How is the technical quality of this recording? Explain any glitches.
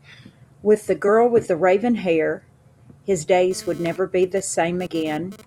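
The recording has two kinds of fault. There is damaged compressed data at 1.07 s and 4.86 s, and GSM phone buzz from 3.51 s to 5.42 s.

Damaged data in a compressed stream: at 1.07 s and 4.86 s, corrupted frames throw the decoder out of sync. Each one is a brief glitch, with a short ragged smear on the spectrogram and a small jump in the waveform.

GSM phone buzz: from 3.51 s to 5.42 s, a nearby phone transmitting data sends radio bursts that the audio circuitry rectifies. The result is a raspy 217 Hz buzz about 22 dB below the speech. On a spectrogram it appears as evenly stacked harmonic lines that come and go.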